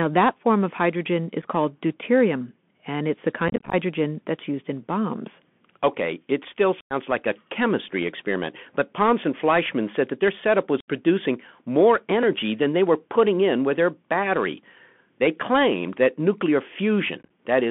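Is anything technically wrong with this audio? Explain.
Yes. Two faults are audible in this speech clip.

The first runs throughout: the Bluetooth CVSD headset codec. CVSD encodes each sample as a single up-or-down bit at 64 kHz, with an adapting step size. That fits a 64 kbps link. The band is limited to about 200 Hz to 3.4 kHz, so the sound is thin and phone-like. The damage is plainly audible. Sibilants turn scratchy. Loud, bright passages distort where the step cannot keep up. A grainy hiss sits under the speech.

The second is unconcealed Bluetooth headset packet loss. Short voice packets between headset and phone went missing, and nothing filled the gaps. The first is a brief hole at 1.42 s, between "form of hydrogen is" and "called deuterium and it's". From 3.48 to 3.74 s, about 135 ms drops out in scattered bits, the longest about 22 ms, giving a chopped, crackly stretch. At 6.81 to 6.93 s, after "bombs okay it still" and before "like a chemistry experiment", nearly 100 ms vanishes. 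At 10.80 to 10.88 s, after "said that their setup", 75 ms is gone. From 17.23 to 17.30 s, scattered gaps total about 38 ms. The edges are abrupt and can click. The speech returns briefly quieter after each gap.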